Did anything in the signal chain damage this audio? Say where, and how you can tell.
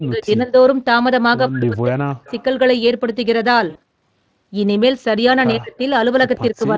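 Yes. Call processing: speech suppressed in double talk at 0.0–0.55, 1.49–2.28, 5.55–5.79 and 6.51–6.77 s, with the level cut by about 10 to 40 dB, likely the echo canceller ducking during overlap.

Call processing: echo leak at 2.26–2.44 and 6.33–6.39 s, a faint copy of the voice about 30 dB down and 109 ms late, likely residual loudspeaker echo passed back.

Network: VoIP packet loss concealed by the speech codec at 3.69–3.79 s. A 60 ms gap, which fits three 20 ms frames, is filled with a fading extrapolation.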